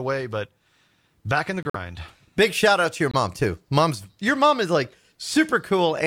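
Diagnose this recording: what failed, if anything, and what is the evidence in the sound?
The codec stage failed, with corrupt frames muted. Sound drops abruptly to silence at 1.63 s, after "back in the", for 0.13 s. It drops again at 3.11 s, after "shout out to your", for 0.04 s. The decoder rejected damaged frames, and the player filled the gaps with silence. Timing is kept.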